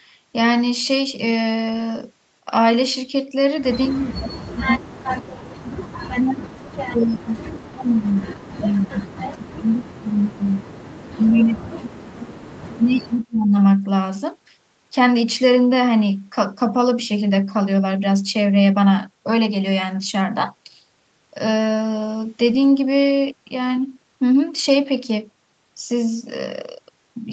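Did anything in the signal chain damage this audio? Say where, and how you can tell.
Yes. The damage is in the call processing stage, where the speech suppressed in double talk shows as the talker dipping deeply, by roughly 40 dB at worst, at 3.88–5.57 s, 6.08–10.68 s, 11.12–12.4 s and 12.7–13.55 s. The likely cause is that the far side was talking at the same time. The echo canceller could not tell near speech from loudspeaker echo and attenuated everything.

Echo leak also comes from call processing and overlaps that second suppressed stretch. There are brief, faint delayed copies of the voice at 8.7–8.83 s, about 20 dB below the speech, and at 10.15–10.2 s, about 25 dB below. Both trail their source by 228 ms. The likely cause is a loudspeaker on one end whose echo canceller left residual pickup, which was then sent back. The top of the band reaches 8 kHz, as expected from call microphone processing.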